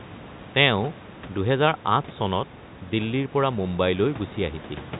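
Nothing stood out on listening: the room's background noise sits about 19 dB below the speech, and the telephone-band coding stops everything above 3.8 kHz, as that path normally does.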